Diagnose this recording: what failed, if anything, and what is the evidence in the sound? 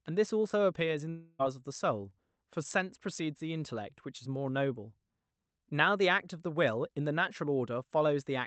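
Long network dropout, 1.09 to 1.41 s, at the network stage. Speech stops arriving; the receiver stretches the last sound into a fading buzzy hiss across the whole 0.3 s gap, never reaching silence, then resumes past the lost audio. Lost packets are the likely cause.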